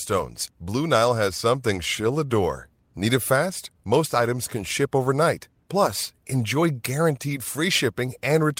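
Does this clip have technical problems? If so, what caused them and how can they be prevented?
No technical faults are present.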